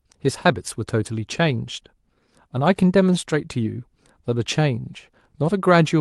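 No dropouts, clipping, glitches or other technical faults are audible anywhere in the recording.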